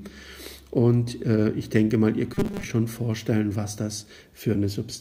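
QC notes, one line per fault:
2.34–2.64 s: robotic sound from repeated short buffers, a rigid 200 Hz buzz, likely a 5 ms block looping in place of most of the audio.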